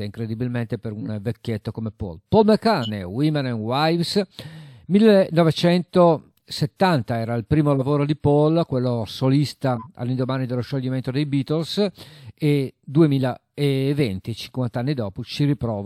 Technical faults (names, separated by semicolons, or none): corrupt frame decoded